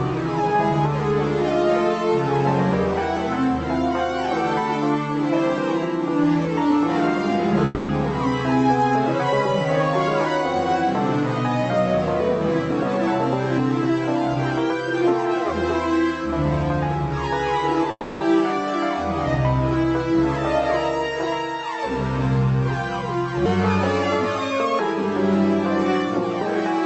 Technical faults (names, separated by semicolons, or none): long network dropout; section at the wrong speed